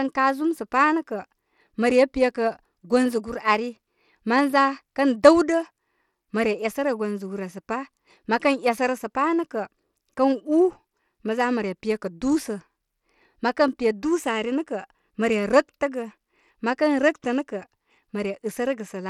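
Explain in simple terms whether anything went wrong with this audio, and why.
Bluetooth SBC compression runs through the whole recording, start to finish, and its damage is plainly audible. The speech was likely squeezed through Bluetooth's basic codec, which cuts the sound into a few frequency bands and gives the faint top ones too few bits. The highest detail vanishes above about 17 kHz, and a gritty roughness clings to the voice.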